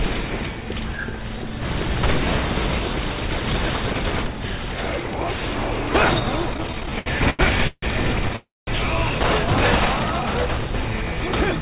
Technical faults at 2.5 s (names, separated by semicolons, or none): none